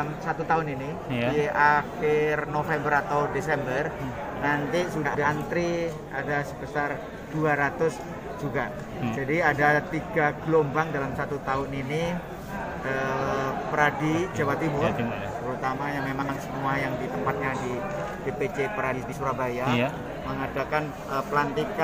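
Frames out of order at 5.05 to 5.24 s, 16.22 to 16.37 s and 18.93 to 19.13 s: two adjacent blocks of roughly 93 ms (about 70 ms at 16.22 s) play swapped, giving a garbled flutter. Unlike a dropout or repeat, no time is lost.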